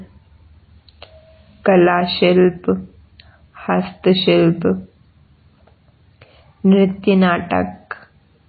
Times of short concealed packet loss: none

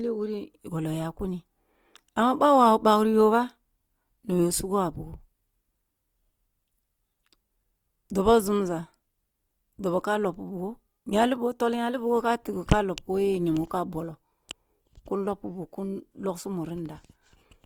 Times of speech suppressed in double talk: none

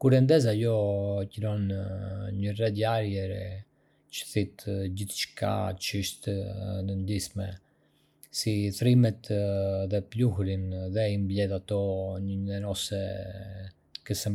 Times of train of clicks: none

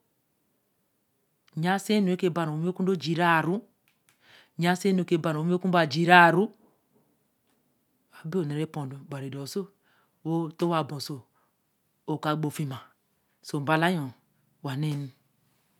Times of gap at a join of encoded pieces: none

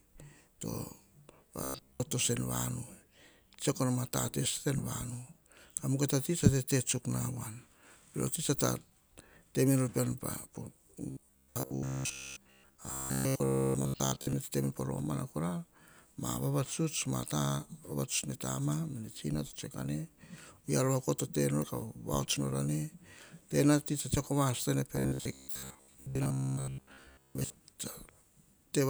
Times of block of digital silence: none

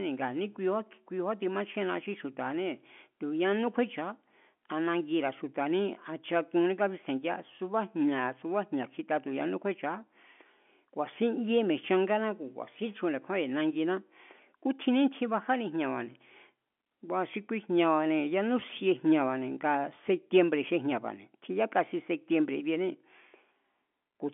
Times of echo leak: none

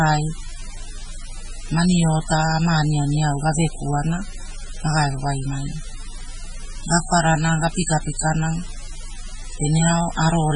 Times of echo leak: none

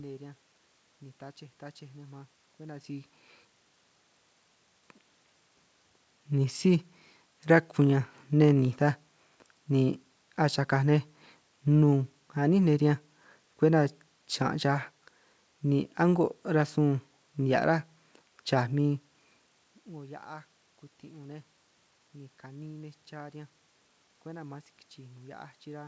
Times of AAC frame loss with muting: none

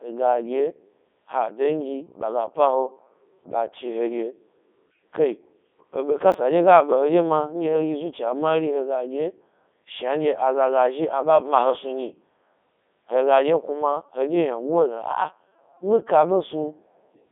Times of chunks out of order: 6.32-6.34

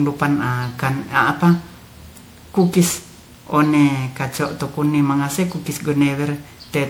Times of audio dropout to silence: none

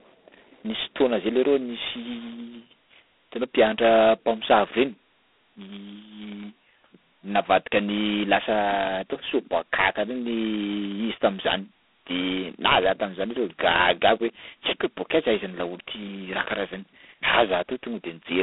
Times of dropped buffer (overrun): none

